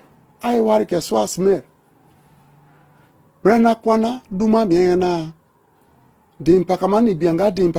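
Speech, likely passed through Opus compression in its music (CELT) mode at a low bitrate, consistent with about 16 kbps. Starved of bits, the encoder fills bands with folded or noise-like content, so the whole clip sounds grainy and rough, though content still extends to about 20.2 kHz.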